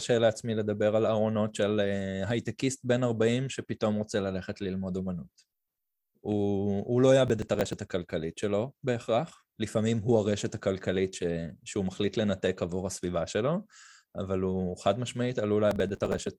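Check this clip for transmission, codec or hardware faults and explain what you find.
Two bursts of processor overload crackle are present, from 7.28 to 7.73 s and from 15.71 to 16.27 s. The processor couldn't finish short buffers, which fits roughly 5 ms each, in time, and many deadlines in a row were missed. Each missed slice was skipped, so the speech is chopped by a rapid run of tiny hard-edged gaps. It sounds like gritty tearing over the voice. Unlike a single network dropout, it is dense repeated crackle rather than one clean hole.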